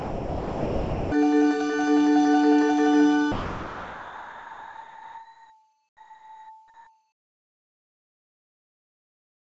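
From 0 to 1.12 s, the sender's voice detector likely took the opening sound for background and stopped sending. This is sound dropped by the voice detector: the audio gives way to steady synthetic noise until transmission resumes. From 3.32 s to the end, discontinuous transmission likely halted sending, and the receiver substituted comfort noise in place of the background. The real background, about 23 dB below the loud parts, becomes flat, featureless noise about 3 dB quieter.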